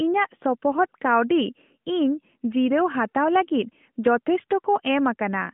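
No technical faults are audible.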